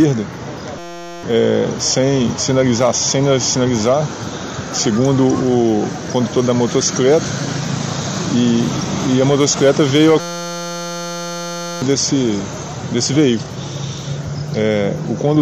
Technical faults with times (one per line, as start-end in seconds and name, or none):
0.78-1.23 system hang loop
10.20-11.82 system hang loop